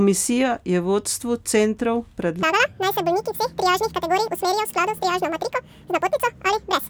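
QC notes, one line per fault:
2.43–6.89 s, audio read two samples at a time (double speed): paired samples taken as single frames, so speech runs 2x fast, an octave higher.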